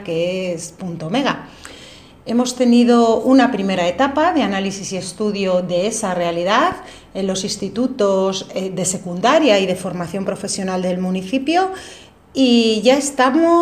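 Nothing is technically wrong with the audio in this clip.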